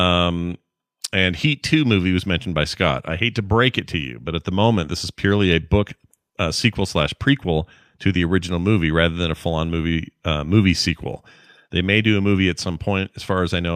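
A speech recording with nothing technically wrong in it.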